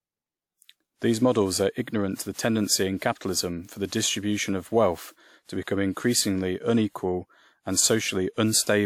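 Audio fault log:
Throughout, generation loss: the speech has a swirly, hollow smear and softened consonant attacks, more than a single pass at around 96 kbit/s would give, likely from being encoded about four times with WMA, each pass adding fresh quantisation noise, with nothing above 19.1 kHz.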